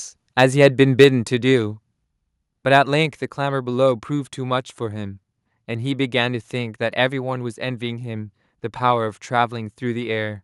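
Microphone overload appears at 0.41 to 0.66 s and again at 1.00 to 1.04 s. The loudest peaks are likely driving the microphone input past the converter's ceiling, so their tops are sheared flat. The first pass is mild, about 1 dB over with only a sliver of samples touched. The second is about 3 dB over, with roughly a tenth of samples flattened, and gives a sharper crackle.

Microphone volume stepped down at 1.04 s, right after that harsher peak. The level of everything drops abruptly by about 2 dB in a single step, most likely the call software cutting the device's input volume in reaction to the clipping.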